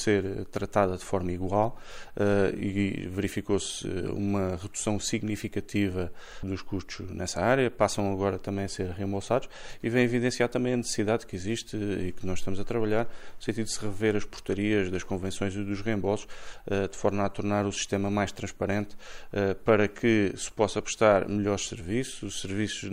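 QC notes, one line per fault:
No fault found, so there is nothing to note for QC.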